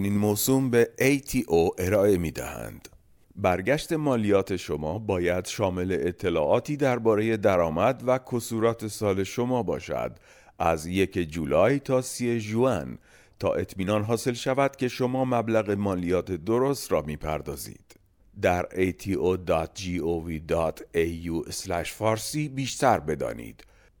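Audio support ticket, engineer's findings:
Pre-emphasis left on, 0.00 to 3.41 s. Thin, bright, sibilant top end; treble up about 8 dB at 10 kHz relative to 1 kHz. Matching de-emphasis not applied, so the recording-stage boost stays. Rise fits the CD 50/15 µs curve. Told apart from a presence or EQ boost by its shape: a smooth shelf climbing steadily above a few kHz, no narrow peak. Ends abruptly at 3.41 s as balance returns.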